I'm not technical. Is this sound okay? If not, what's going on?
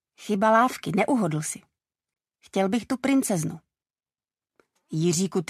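No, there is one fault. A corrupt frame muted at 2.14 s leaves a sudden gap of silence that lasts about 23 ms, until 2.16 s. The audio was stored in small compressed chunks, and one chunk got scrambled. The player couldn't make sense of it, so it played silence in its place. The gap is about the length of a single chunk. Because the silence fills the chunk's slot exactly, the timing of the sound stays on track.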